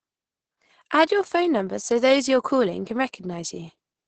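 From start to finish, the speech carries Opus voice compression damage, and it is heavy. Nothing is heard above about 8.8 kHz, so the top of the band is simply gone. Below that, the SILK linear-prediction coder rebuilds the voice from a predicted envelope and a coarsely coded excitation. That thin excitation makes the speech sound muffled and hoarse, with a slightly robotic edge. The degree of damage fits a bitrate of around 10 kbps.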